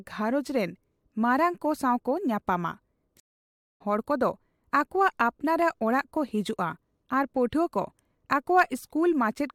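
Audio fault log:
3.20–3.80 s, stream reconnect: after "ᱢᱟᱨᱟᱝ ᱠᱚ ᱥᱟᱣᱠᱚ ᱧᱟᱯᱟᱢᱟ" the speech stops for 0.6 s of silence, then resumes at "ᱦᱚᱲ ᱠᱚᱫᱚ" roughly 0.7 s further on, as a fresh decoder joins the stream mid-flow. Unlike a plain dropout, speech is skipped, not merely paused.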